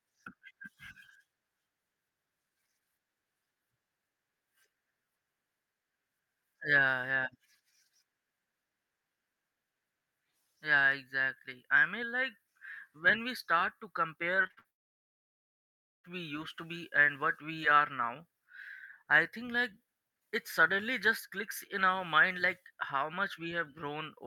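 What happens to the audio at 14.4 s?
At 14.43 s the speech hits repeated packet loss, giving a robotic sound until 14.66 s. Packets go missing several times in quick succession. Each hole is papered over by stretching the last bit of sound, and the next hole arrives soon after. The longest gap is 53 ms. About half of that stretch is concealed rather than real. It sounds choppy, with pieces of the speech missing.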